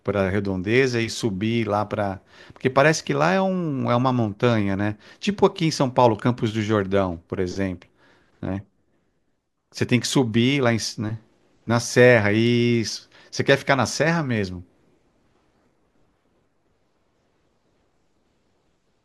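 No technical faults can be heard anywhere in this recording.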